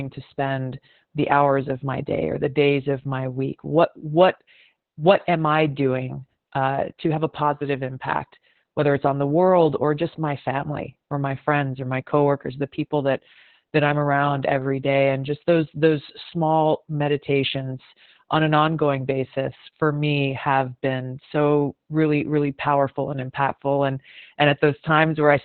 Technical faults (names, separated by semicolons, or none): Opus voice compression